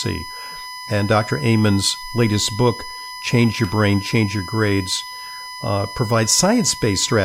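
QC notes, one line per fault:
Throughout, USB whine: a steady tone fixed at 1 kHz sits under the speech for the whole clip, roughly 15 dB below it, and is strongest at that pitch. The bus draws current in 1 ms frames, and that pulsing reaches the audio through the power or ground path, giving a 1 kHz whine. Mains hum would sit at 50 or 60 Hz, and its pitch would stay the same however the speech moves.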